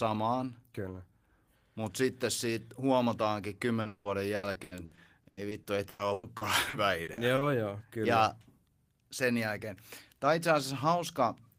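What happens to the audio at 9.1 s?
Nothing goes wrong at 9.1 s: the speech continues intact through that moment, with no dropout, click or other audible fault.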